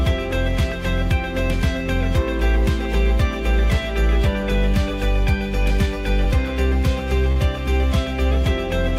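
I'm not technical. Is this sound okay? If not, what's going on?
No. There is a short stall from a late packet at 7.32 to 7.39 s. A piece of the sound arrived late, so the player held the last sound for about 45 milliseconds while it waited, then carried on. Nothing is lost, but that moment briefly drags.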